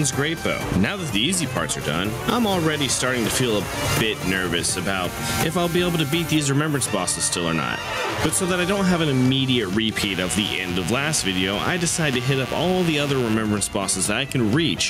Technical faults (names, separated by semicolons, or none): gain pumping; mains buzz